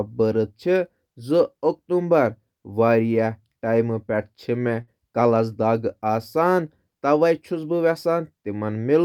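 A burst of packet loss hits this speech clip at about 4.81 to 4.90 s. Roughly 60 ms of audio never arrived, so the receiver stretched the last sound and faded it out across the gap, leaving a brief held buzz or hiss before speech resumes further along.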